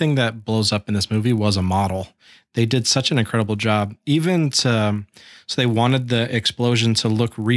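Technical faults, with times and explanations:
Throughout, resampler restarted on every block: a steady 50 Hz buzz rides under the speech. Each 20 ms block was converted on its own, which fits a conversion from 48 kHz down to 24 kHz, so the filter at every block edge lacked its true neighbouring samples and left a small error there. Unlike underrun clicks or dropouts, no audio goes missing, the ticks are perfectly regular, and the buzz disappears when the speech stops.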